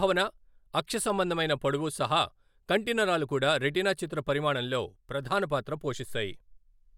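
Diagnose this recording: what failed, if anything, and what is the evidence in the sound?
Nothing seems to have gone wrong anywhere in the chain here, as there's no audible sign of trouble at any point in the speech.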